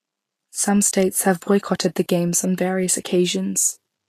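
From start to finish the speech carries a hissy, grainy roughness and softened consonant attacks, likely Vorbis compression at a low setting, which fits a bitrate around 36 kbps. Coarse treble quantisation turns fine detail into noise-like fuzz. A spectrogram shows a hard ceiling at 14.2 kHz, with speckled, smeared energy beneath it.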